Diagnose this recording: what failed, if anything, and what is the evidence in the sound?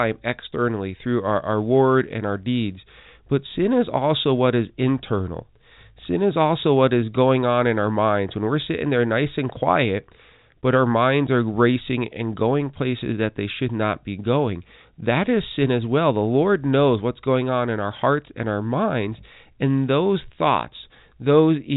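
Nothing in the recording has failed; no stage in the chain shows a fault. The speech arrives through G.711 mu-law telephone coding at 64 kbps, so it stops at 4 kHz and carries a faint quantisation hiss that rises and falls with its level, as that format should.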